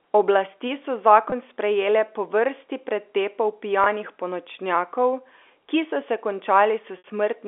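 Packet loss with pitch repetition at 1.30–1.32 s (just before "sprejele po vrsti pretepov"), 3.84–3.86 s (just after "sprejele po vrsti pretepov") and 6.98–7.04 s: 20 ms gaps filled by a briefly held, buzzy repeated pitch period, and a 60 ms gap that fades out rather than clicking or dropping to abrupt silence, all within the 300–3500 Hz telephone band of the G.711 line.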